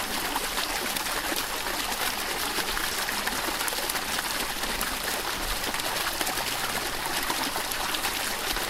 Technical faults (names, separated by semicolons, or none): corrupt frame decoded